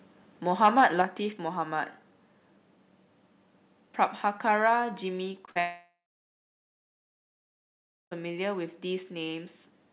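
Microphone overload, 0.64 to 1.02 s: the loudest peaks sound harsh and crackly, with tops squared off about 4 dB over full scale, likely from input gain set too high.

Microphone volume stepped down at 1.02 s: voice and background drop by about 5 dB at once, likely the call software cutting input gain after the distortion.

Short concealed packet loss at 5.32, 5.46 and 5.51 s: gaps of 20 to 40 ms were patched by extending the preceding sound, heard as brief smears and wobbles.

Long network dropout, 5.60 to 8.13 s: roughly 2.5 s likely never arrived. The concealment buzz fades within a few tenths of a second, leaving about 2.1 s of silence before the audio resumes past the missing part. Throughout, nothing above 4 kHz is present, consistent with a G.711 call path.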